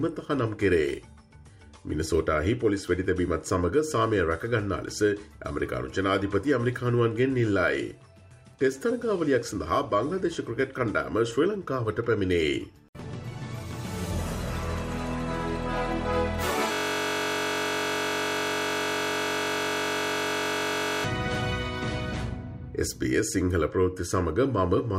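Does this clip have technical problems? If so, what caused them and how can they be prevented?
Yes: a system hang loop from 16.73 to 21.04 s. A 21.33 ms slice, likely a 1024-sample buffer, repeats exactly, giving a steady 46.9 Hz buzz. Mains hum would not replace the sound. Keep the audio thread at real-time priority and use drivers that silence output when stalled.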